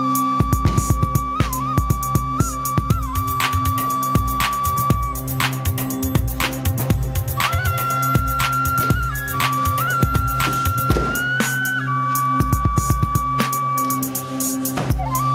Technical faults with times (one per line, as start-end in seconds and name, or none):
none